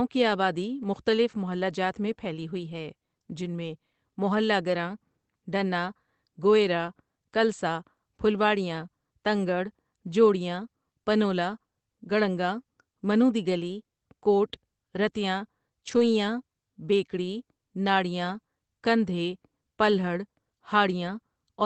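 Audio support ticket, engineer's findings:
Lost packet rebuilt from error correction at 15.83–16.01 s, just after "دی گلی کوٹ رتیاں". No gap, but a brief rough, noisier stretch. Opus in-band FEC: decoder played low-bitrate copies from the following packets, roughly 100 ms rebuilt, which fits five 20 ms packets. Audio band tops out near 8 kHz.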